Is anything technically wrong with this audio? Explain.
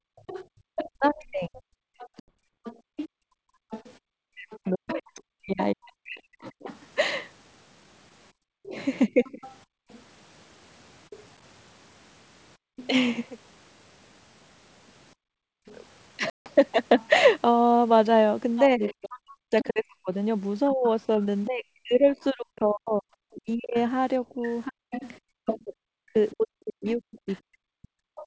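Yes. Four kinds of fault are audible in this speech clip, all typical of a two-way call.

Background gated by the echo canceller, from 0.0 to 4.01 s and again from 8.32 to 15.66 s: while the far end was playing through the loudspeaker, the echo canceller clamped the microphone to keep that playback out. The room ambience therefore dips sharply, by about 38 dB at its deepest, for around a second in total within each stretch, then comes back once the canceller releases. The effect is a background that pumps in and out.

Other side's voice leaking through, from 0.16 to 28.24 s: a second voice is present underneath the talker for almost the whole clip, roughly 15 dB below the main speech. The likely cause is residual echo: the device played the far end aloud, and the echo canceller failed to remove all of it from the microphone signal, so scraps of that playback were sent back out.

Speech suppressed in double talk, from 0.81 to 9.43 s and from 18.69 s to the end: the talker's own voice sags, thins or breaks up in pieces, by as much as roughly 40 dB. 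This adds up to around three seconds in the first stretch and around five in the second. The likely reason is that both sides were talking at once. The canceller could not tell the local voice from the loudspeaker echo, so it attenuated both.

Packet loss on an ADPCM call, at 2.20 to 2.31 s and 16.30 to 16.50 s: 80 ms and then 160 ms of audio are missing, which fits several consecutive packets dropping each time. The gaps were filled with silence, so each one is a hard-edged hole. Afterwards the decoder's adaptive predictor and step size no longer match the sender's. The speech returns slightly distorted until it resynchronises a few tens of milliseconds later.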